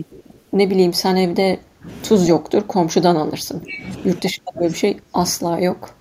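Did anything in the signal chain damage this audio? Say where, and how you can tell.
Yes. An echo leak from 0.05 to 0.5 s places the damage in call processing: a very faint copy of the voice, about 40 dB down, trails it by 135 ms. This is likely a far-end loudspeaker echo that the echo canceller failed to remove fully.

Speech suppressed in double talk appears at 1.26–1.88 s, 2.33–3.82 s and 4.21–6.0 s, also in call processing. The voice drops by up to about 25 dB in pieces, likely because the echo canceller confused overlapping talk with echo and attenuated both.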